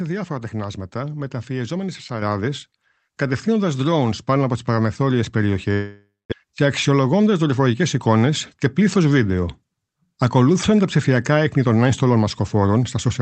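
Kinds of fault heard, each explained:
Microphone volume stepped up: at 2.22 s, right after "διάφορα τεχνάσματα μεταφιεζόμενοι σε", the speech and the background noise jump up together by about 6 dB in a single step. This happens because the call software judged the microphone too quiet and raised its input gain at once.
Long network dropout: from 5.73 to 6.34 s, the speech smears into a fading buzz for about 0.58 s, including about 0.21 s of near-silence, and then resumes with roughly 0.4 s of speech missing. The likely cause is a network dropout, with the receiver concealing the gap.
Jitter buffer speed-up: from 6.43 to 8.16 s, ending just before "και πλήθο βίντεο", the speech runs about 8% fast at unchanged pitch and sounds hurried. The receiver was trimming pieces of one or a few pitch periods to drain roughly 150 ms of extra buffered delay that had built up.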